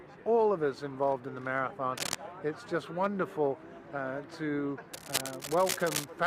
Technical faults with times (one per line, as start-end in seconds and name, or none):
1.97-2.15 cable scratch noise
4.93-6.04 cable scratch noise